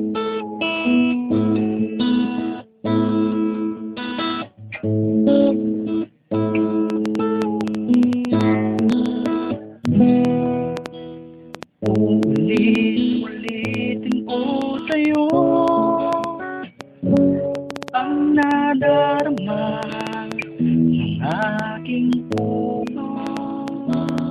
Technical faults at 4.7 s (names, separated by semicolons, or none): none